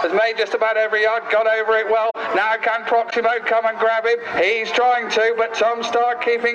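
The audio has two short runs of concealed corrupt frames, at 2.10 to 2.16 s and at 3.10 to 3.13 s. Damaged AAC frames were detected and the decoder covered them by muting or reusing earlier spectrum; the 57 ms span fits two frames, the 34 ms span one.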